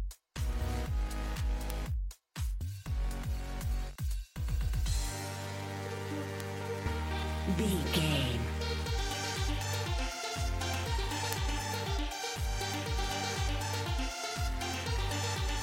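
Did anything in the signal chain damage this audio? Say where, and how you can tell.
Yes. Single sharp ticks at 1.70, 6.40 and 11.33 s, broadband and unrelated to the surrounding sound, are bit error spikes: a flipped bit in memory or a digital link throws a sample or two by a power of two, which then snaps straight back.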